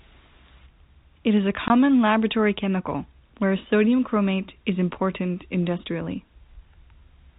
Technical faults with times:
1.68-1.70 packet loss filled with silence

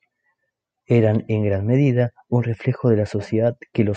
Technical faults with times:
none

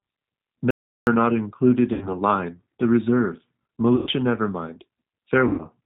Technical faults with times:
0.00-5.85 G.729 codec
0.71-1.07 audio dropout to silence
1.93-2.16 VoIP packet loss concealed by the speech codec
3.96-4.10 VoIP packet loss concealed by the speech codec
5.48-5.66 VoIP packet loss concealed by the speech codec

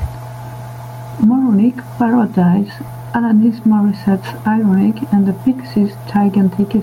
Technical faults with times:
0.00-6.83 gain pumping

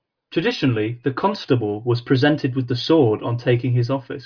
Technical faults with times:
none

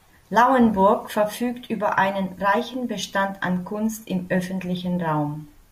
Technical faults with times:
none

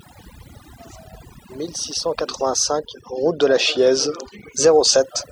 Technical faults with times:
0.00-5.31 overdone noise removal

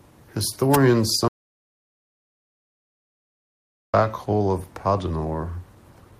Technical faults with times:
0.00-6.20 clock drift between sender and receiver
0.10-6.12 repeated timing corrections
1.28-3.94 audio dropout to silence

